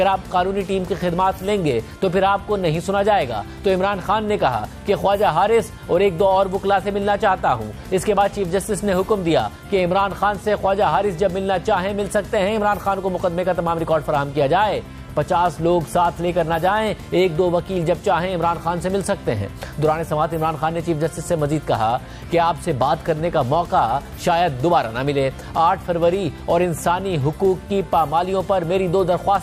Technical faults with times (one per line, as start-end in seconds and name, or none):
none